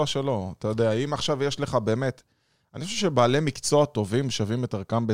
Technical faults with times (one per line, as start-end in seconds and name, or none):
none